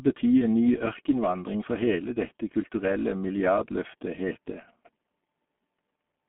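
From start to finish the speech carries heavy G.723.1 codec damage. Everything outside a 200 Hz to 3.4 kHz line band is gone, and slow, frame-by-frame voice modelling, consistent with a 6.3 kbit/s mode, leaves the sound muffled and hoarse, with smeared consonants.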